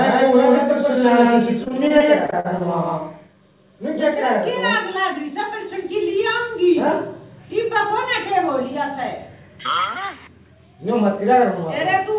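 Right from the start the audio has a doubled audio track. A second full-band copy sits around 150 ms behind the first at about the same level, with no decay or room colour. So everything has a dry, slapback double. The likely cause is the same signal reaching the mix twice, once through a slower path, and it stops abruptly at 4.14 s.

Overlapping that, from 1.64 to 2.62 s there's repeated packet loss. Short holes keep arriving one after another, the longest about 46 ms. Each one is patched by stretching out the last bit of sound, and those fill-ins cover nearly a fifth of that span. The result is choppy, with pieces missing.

Throughout the clip, nothing reaches above 4 kHz, which fits the narrowband G.711 call path it went through.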